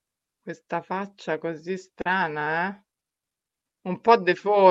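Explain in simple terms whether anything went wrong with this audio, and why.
Two tiny smears break the speech, at about 2.01 s and again at 2.95 s. That is short concealed packet loss: bits of the call, about 40 and 20 thousandths of a second long, arrived too late, so the receiver patched each gap by stretching the sound just before it.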